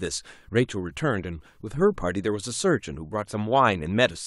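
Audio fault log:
No faults found in the speech; nothing to log.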